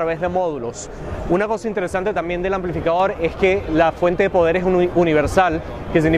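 At 3.00 s there's a sudden gain jump: the sound and its background noise step up together by about 4 dB in an instant and stay there to the end. The likely cause is a gain change applied with no ramp, so the two levels just snap.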